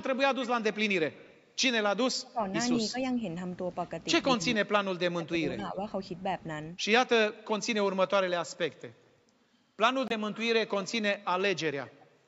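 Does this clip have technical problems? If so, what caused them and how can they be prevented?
Yes. There are three kinds of fault in this speech clip.

Echo leak appears from 0.00 to 0.18 s, 0.42 to 0.78 s and 1.13 to 1.37 s. A faint copy of the speech trails the original by about 197 ms. It is roughly 20 to 30 dB down and loudest in the middle stretch. The likely cause is a loudspeaker on the far end whose echo canceller let part of the microphone pickup through. On a spectrogram the harmonic pattern repeats, shifted right by about 0.2 s and much weaker. Retuning or strengthening the far end's echo cancellation, or using a headset there, prevents it.

Speech suppressed in double talk shows as dips from 2.31 to 2.47 s, 2.91 to 2.97 s, 4.37 to 4.62 s and 4.91 to 5.78 s. The level drops by roughly 10 to 30 dB, and it drops deepest, close to cutting out, in the last and longest stretch. These dips likely come from an echo canceller that heard both sides talking at once, mistook the talker for echo and turned everything down. 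A waveform shows the envelope pinched inward, and a spectrogram shows the band fading. A canceller with better double-talk detection, or less aggressive suppression, avoids it.

A Bluetooth dropout cuts a hole from 10.08 to 10.12 s, about 23 ms long, which fits one lost codec frame. The likely cause is a packet that missed its slot on the wireless link, so the output went silent and then resumed as though playback had continued. On a waveform this is a flat gap. On a spectrogram it is a thin vertical blank across all frequencies, which stop at 8 kHz in this call-processed audio. Keeping the headphones close to the source, away from interference, prevents it.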